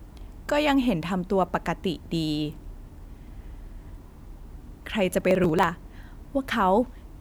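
From 5.21 to 5.63 s, processor overload crackle tears through the speech. Around ten buffers of about 10 ms each miss their deadline and are skipped, leaving gritty, hard-edged gaps.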